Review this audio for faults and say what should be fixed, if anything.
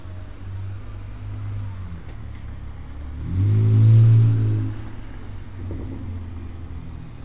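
Nothing in this audio needs to be fixed, as it has no faults.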